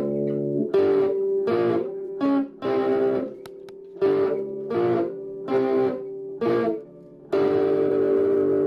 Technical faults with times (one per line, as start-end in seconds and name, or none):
2.05-2.09 corrupt frame concealed
3.35-3.39 corrupt frame concealed
7.88-7.91 corrupt frame concealed